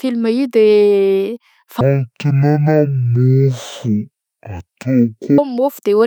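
From 1.81 s to 5.38 s the speech drops to half speed and falls a full octave, a stereo read as mono fault: left and right samples alternate in the stream but are played back one after another as a single channel. On a spectrogram the harmonics compress toward the bottom, with a fainter mirrored copy in the upper half, and the waveform stretches to twice its length.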